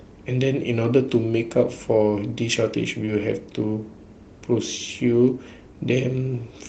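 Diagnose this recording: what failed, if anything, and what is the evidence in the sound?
The network stage lost a packet. Around 3.05 to 3.09 s there's a short concealed packet loss: about 20 ms of the call never arrived in time, and the decoder bridged it by stretching the preceding sound. You hear a brief smear before it blends back in.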